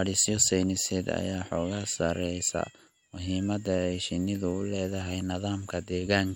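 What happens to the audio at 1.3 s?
Nothing goes wrong at 1.3 s: the speech there plays through intact, with no dropout, click or other fault.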